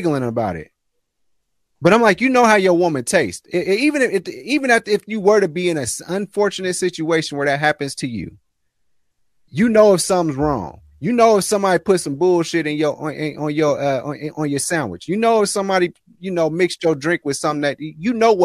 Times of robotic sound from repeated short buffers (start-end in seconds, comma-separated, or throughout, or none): none